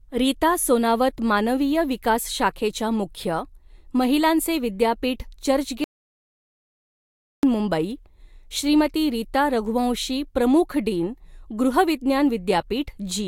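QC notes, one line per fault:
5.84–7.43 s, audio dropout to silence: the speech cuts off mid-flow and returns about 1.59 s later, with the gap fully silent and no room tone underneath. That empty stretch means the input itself stopped arriving while recording carried on writing silence, likely from a disconnected device, a failed link or a stray mute. Whatever was spoken during those 1.59 s is lost rather than masked.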